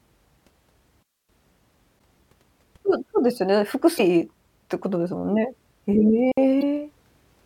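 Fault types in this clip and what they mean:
Digital wireless dropout: The receiver mutes when the link loses too much data, leaving clean holes of near silence, about 260 ms at 1.03 s and 60 ms at 6.32 s. There is no noise burst around them, unlike the chirps from damaged compressed data.
Damaged data in a compressed stream: Corrupted bytes make the decoder misread frames and lose sync while it hunts for the next header. This is heard as brief blips of about 40 to 50 ms at 1.96, 3.95 and 6.59 s.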